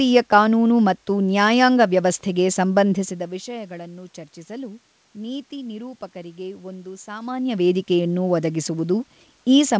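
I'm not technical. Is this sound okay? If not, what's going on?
Yes, this sound is okay; nothing is wrong here.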